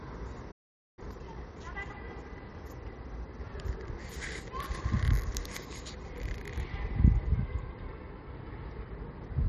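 At 0.51 s the sound cuts out abruptly in mid-flow and the output stays completely silent until 0.99 s, a gap of about 460 ms, before resuming where it left off. This is a playback stall. The likely cause is that the player ran short of buffered data, or its audio thread was briefly blocked, so nothing could be sent to the output until it recovered and started feeding samples again.

From 0.99 s to 1.91 s the audio comes back sounding hurried, running at about 1.5 times normal speed while its pitch stays unchanged. This is time-compressed catch-up. Having fallen behind during the stall, the player trims its backlog by dropping small slices of audio and cross-fading across the joins. That shortens the material without transposing it.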